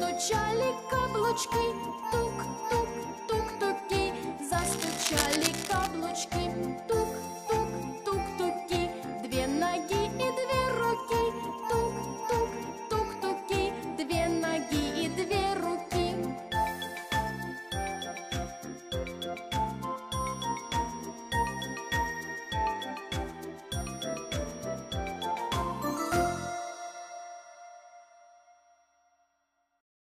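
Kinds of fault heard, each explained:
Cable scratch noise: a worn cable, connector or control was likely moved, making its contact resistance jump rapidly. From 4.58 to 5.87 s this lays dense, uneven bursts of scratching and rustling over the sound, only about 5 dB below it.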